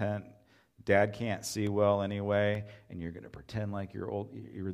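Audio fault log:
1.67 to 2.55 s, CD scratch ticks: five quick ticks after "can't see", the longest about 3 ms, where a scratch beat error correction each disc turn before "and you're going to".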